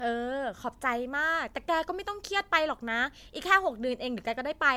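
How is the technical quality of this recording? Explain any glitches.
The speech carries one continuous fault. Generation loss runs throughout: a swirly, hollow smear with blurred consonant attacks, worse than one encode at about 100 kbit/s would give, likely from roughly four successive MP3 passes.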